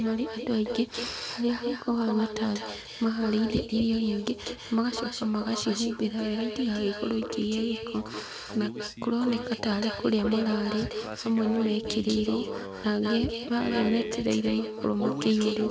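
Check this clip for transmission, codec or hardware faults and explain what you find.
One fault runs through the whole clip: echo with no canceller. Every phrase of speech is followed about a fifth of a second later by a second, quieter copy, roughly 8 dB below the direct signal. The far end is playing the call over a loudspeaker, its microphone is picking that up, and no echo cancellation is removing it before it travels back. The returning copy sounds thinner. The band-limited sound with nothing above 8 kHz points to a wideband codec such as G.722, and that part of the call path is working as expected.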